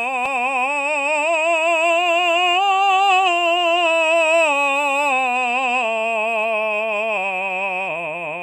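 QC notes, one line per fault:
No faults heard anywhere in this music.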